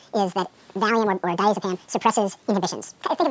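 From start to end, the clip suffers a wrong sample rate. Audio recorded at 8 kHz is played back at 16 kHz without conversion. Everything runs twice as fast. Pitch rises a full octave, twelve semitones. The sound is squeaky, rushed and unnaturally bright.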